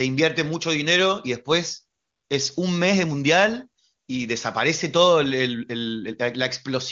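From 2.01 to 2.29 s, about 280 ms, AMR comfort noise takes over: the phone judged the talker silent, stopped sending speech frames, and the receiver filled the gap with smooth synthetic hiss. Unlike a dropout, the gap isn't silent, and the real background switches back abruptly.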